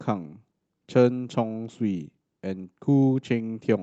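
Speech recording with no technical faults to report.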